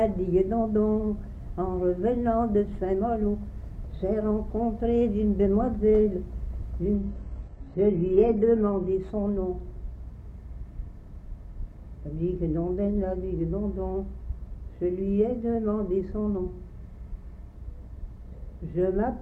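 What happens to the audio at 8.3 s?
At 8.3 s, an adaptive stream at a lower bitrate (6.94–8.94 s) follows a slowed connection: codec artefacts rise, switching abruptly without the gap a dropout leaves.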